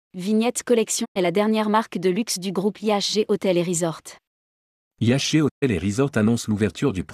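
At 1.04 to 1.17 s, just before "la dernière marque de", and at 5.48 to 5.64 s, the speech fades out within about 20 ms to full silence and then resumes. This is a digital broadcast dropout: the receiver muted while corrupted frames arrived. Unlike a click or concealment smear, each hole is clean silence, with the missing speech simply gone.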